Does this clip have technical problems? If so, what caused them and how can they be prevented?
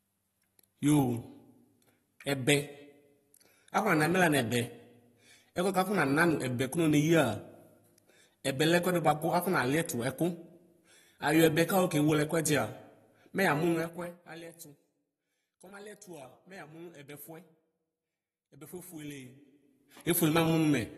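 Yes. AAC compression runs throughout the clip and likely explains its dull, smeared quality. Nothing is present above 12.4 kHz, and the speech carries a warbling, fizzy texture on sibilants. This points to AAC-LC at a low bitrate, roughly 36 kbps, where the encoder narrows the band and coarsely quantises what remains. To prevent it, encode at a higher bitrate or keep a lossless master for distribution.

Zipper noise runs from 13.61 to 14.44 s, just after "mɛ yamʋ". The level falls by about 20 dB in 2 dB jumps, around fifteen a second, and each unsmoothed jump leaves a small click that together form an audible ticking. To prevent it, apply gain changes with per-sample smoothing or interpolated ramps rather than stepped increments.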